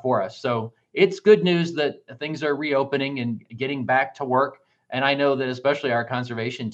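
No technical faults detected.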